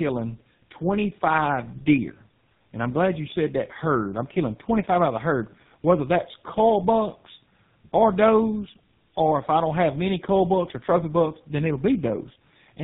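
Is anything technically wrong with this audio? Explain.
Yes, there is tandem speech coding throughout: the speech was coded twice by low-rate codecs, which fits an AMR-NB then GSM full-rate chain. The second coder compounds the first's errors, leaving rough, muffled, warbly audio with nothing above 3.8 kHz.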